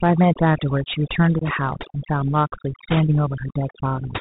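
From the start, the speech shows overdone noise removal. The suppressor was set too aggressively, so frequency bands that sit close to its noise estimate are pulled down hard or switched off. Low-level parts of the speech are cut along with the noise. The gaps between phrases fall to near silence with small twinkling specks.

Throughout the clip there is also plainly audible damage from the Bluetooth CVSD headset codec, consistent with a 64 kbps narrowband headset link. CVSD sends one bit per sample saying whether the waveform rises or falls, with an adaptive step size. Everything above 4 kHz is gone, giving a boxed-in, telephone-like band. Where the signal changes faster than the step can follow, the sound distorts, sibilants come out scratchy, and a grainy hiss sits under the speech.

From 1.39 to 1.43 s there is unconcealed Bluetooth headset packet loss. About 22.5 ms of audio is missing, which fits a few consecutive short packets dropped between headset and phone. 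Nothing was done to conceal the gap, so it was filled with silence or an idle pattern. The result is a brief hole with hard edges, and the speech resumes quieter for a moment, as the CVSD decoder's step size has to build back up.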